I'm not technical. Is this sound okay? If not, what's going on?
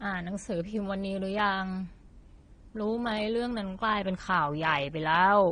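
No. Throughout the whole clip the speech shows transcoding between lossy codecs, likely from being squeezed by one compression format and then squeezed again by a second one. Nothing is left above about 9.8 kHz, so the speech sounds dull and lacks crispness. Each squeeze throws away detail and leaves its own smearing or swirl, and the second one wastes effort preserving the first one's flaws, so both kinds of roughness are heard together.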